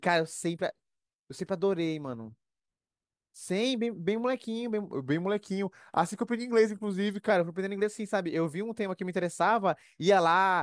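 Speech in this clip slows and drops by about 1.5 semitones from 4.95 to 7.30 s, a wrong sample rate fault. Speed and pitch fall together by a ratio of 0.92, which fits 24 kHz material played at 22 kHz. A pure pitch shift would leave the timing unchanged.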